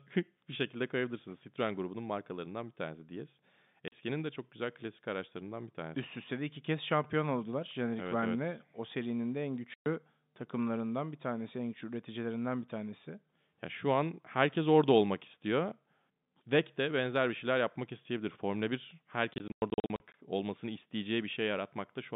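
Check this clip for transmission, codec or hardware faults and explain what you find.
The speech has packet loss filled with silence, heard as hard gaps in an otherwise steady telephone-band signal. A 40 ms hole falls at 3.88 s, after "markalarından bir tanesi diyes". A 120 ms hole falls at 9.74 s, after "serinin de en". From 19.34 to 20.14 s, 360 ms drops out in scattered bursts, the longest 100 ms. All three gaps are multiples of 20 ms, which fits 20 ms packets that never arrived and were replaced by silence. No faded or repeated sound bridges the holes, which is what separates this from loss concealment.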